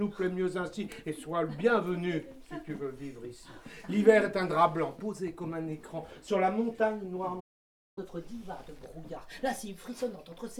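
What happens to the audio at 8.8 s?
At 8.8 s the sound is running fast and sits sharp, raised by about a semitone and a half, with everything hurried along at 1.1 times normal speed. This is catch-up at higher speed, lasting from 7.98 s to the end of the clip at 10.6 s. After a stall, the player resamples its stored backlog to play it faster and recover the lost time. Because it speeds up by resampling, pitch rises together with tempo.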